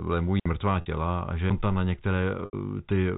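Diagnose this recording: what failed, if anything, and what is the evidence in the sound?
Digital wireless dropout at 0.40 to 0.46 s, in the radio link: a clean 60 ms hole of near silence, the receiver muting briefly on lost data, with no noise burst.

Packet loss with pitch repetition, in the network, at 0.81 to 0.86 s, just before "a že", and at 2.45 to 2.53 s. The receiver repeats the last pitch period to bridge 50 ms and 80 ms gaps, which fits about five and eight lost packets.

CD skip at 1.50 s, in playback, just after "a že": a tiny tick where the laser jumps to another turn of the spiral and the audio resumes from a different spot. Through all of this, the G.711 telephone band limit holds everything under 4 kHz.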